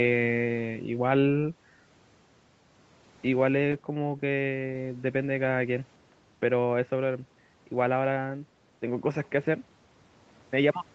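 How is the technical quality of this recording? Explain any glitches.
No glitches are present; the speech has the typical call-path character, with its top end stopping at about 8 kHz as expected from the call's microphone processing and Opus codec.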